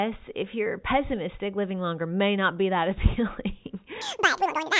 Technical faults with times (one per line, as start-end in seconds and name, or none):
4.01-4.80 wrong sample rate